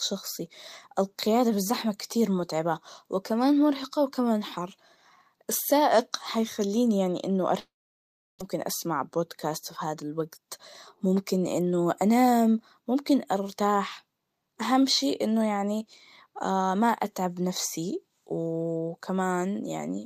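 At 7.59 s, right after "هيخليني يعني إنه", the speech breaks off into a short fading buzz and then about 0.7 s of silence until 8.43 s. This is a long network dropout, likely from packets that never arrived. Roughly 0.6 s of speech is gone when the audio resumes.

From 8.55 s to 11.73 s, ending just before "أنام ممكن أرتاح أهم", a jitter buffer speed-up plays the speech about 6% fast at unchanged pitch. The receiver trims pitch-period slices to shed the delay built up by the dropout, around a fifth of a second in total, and the delivery sounds slightly hurried.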